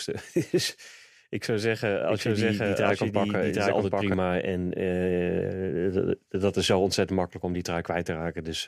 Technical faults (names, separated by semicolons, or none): doubled audio track